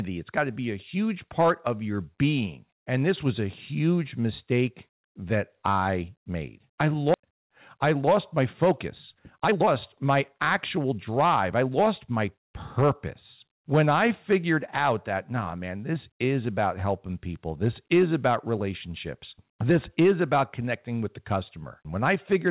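Skip ahead at 7.14 to 7.16 s: right after "that I made I", about a second of speech is dropped and playback jumps straight to later audio that was already queued, with no gap or fill. The two sides of the cut butt together almost seamlessly, so the speech lurches forward.

Jitter buffer speed-up from 7.26 to 12.44 s: with more audio held than its target, the receiver repeatedly removed tiny pitch-period slices to shrink the delay. The speech runs about 10% fast at unchanged pitch and sounds hurried as roughly half a second is trimmed away. Over the whole clip nothing is heard above 4 kHz, which fits a narrowband call codec.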